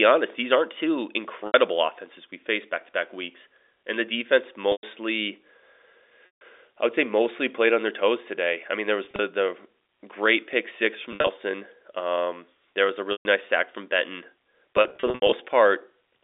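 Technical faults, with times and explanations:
1.47–1.54 s, 4.72–4.83 s, 6.26–6.41 s, 9.05–9.19 s, 11.12–11.28 s, 13.12–13.25 s, 14.77–15.32 s: packet loss with pitch repetition. Across the narrowband telephone line, chunks of 70 to 150 ms drop out, and the receiver fills each gap by repeating the last pitch period and fading it over about 50 ms. The short gaps give a brief buzzy hold, and the longer ones die to silence before the speech cross-fades back. At 9.05, 11.12 and 14.77 s the losses are scattered, with longest runs of 30 to 70 ms. The final stretch loses about 320 ms over 0.58 s.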